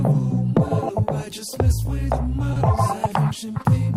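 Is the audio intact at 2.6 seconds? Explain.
No. Just before that point, from 2.53 to 2.57 s, a brief smear or wobble replaces the sound. This is short concealed packet loss: about 20 ms never arrived, and the receiver extended the preceding sound to fill it.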